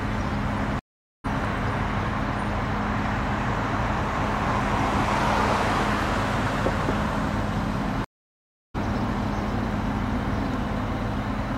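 At 0.79 s and again at 8.04 s, a stream reconnect drops the connection and restarts the decoder: about 0.45 s and 0.7 s of silence, with the audio resuming roughly half a second and 0.7 s further on.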